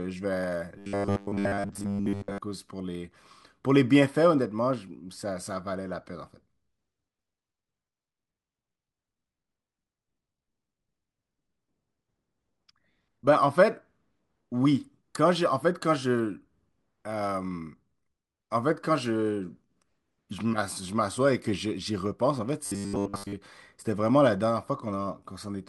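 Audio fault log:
0.78–2.38 s and 22.66–23.33 s: robotic sound from repeated short buffers. The speech collapses into a rigid metallic buzz fixed at 100 Hz, most likely from a 10 ms chunk being replayed while most incoming audio is skipped. The steady pitch sets it apart from gaps or stutter.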